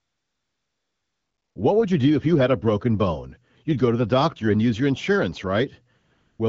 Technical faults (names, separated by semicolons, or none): AMR comfort noise